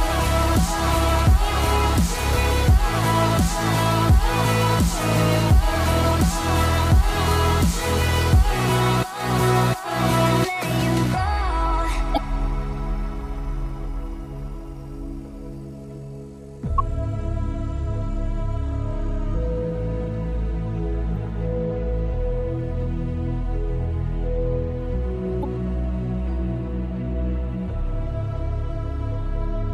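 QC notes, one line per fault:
12.14–12.18 s, 16.76–16.80 s, 21.12–21.17 s, 25.41–25.45 s: damaged data in a compressed stream. These are brief blips, each about 40 ms, where corrupted frames throw the decoder out of sync until it finds the next valid header.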